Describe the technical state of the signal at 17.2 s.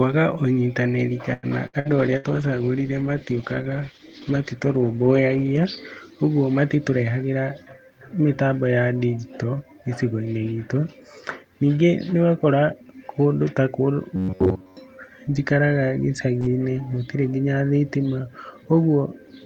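At 17.2 s the speech signal is intact, with no audible fault at that point.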